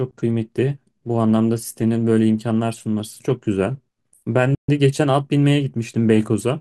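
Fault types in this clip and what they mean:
Playback stall: the speech cuts to silence for about 135 ms at 4.55 s, likely because the player ran dry or its thread was briefly blocked.
Time-compressed catch-up: from 4.69 to 6.03 s the speech runs hurried at about 1.1 times speed, with unchanged pitch, as cross-faded trims recover the backlog.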